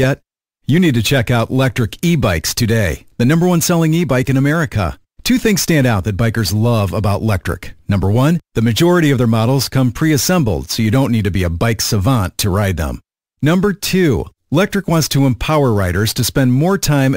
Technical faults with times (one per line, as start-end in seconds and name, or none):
0.00-17.16 imaging from sample-and-hold upsampling